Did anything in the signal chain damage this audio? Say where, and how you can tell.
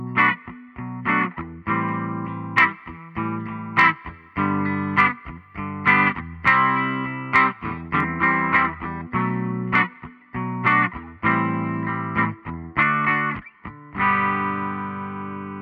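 Yes. From 1.89 s to 8.00 s there is pre-emphasis left on, in the transmission or playback stage. The treble rises steeply, about 13 dB at 10 kHz relative to 1 kHz, which fits the 75 µs FM curve. The sound turns thin and hissy. The matching de-emphasis was never applied.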